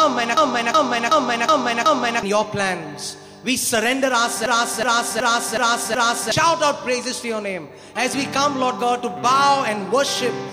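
A system hang loop occurs twice, from 0.37 to 2.23 s and again from 4.46 to 6.32 s. Each time, playback froze while the hardware kept replaying its ring buffer: a 0.37 s slice, which fits a 16384-sample buffer, repeats five times at about 2.7 Hz, giving a slow, mechanical stutter and dropping roughly two seconds of audio. On a waveform and spectrogram, five identical blocks sit side by side with abrupt seams at each boundary.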